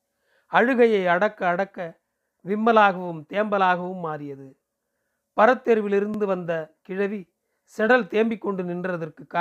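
At 2.09 to 2.14 s and again at 6.14 to 6.19 s, the speech stutters briefly: these are overlapping chunks, where each new 4-second block begins before the previous one finished, so about 50 ms of audio plays twice at the join. Each repeat is heard as a click or hiccup. On a waveform, a 50 ms stretch appears duplicated with a visible discontinuity; a spectrogram shows a thin vertical seam and repeated formant fragments.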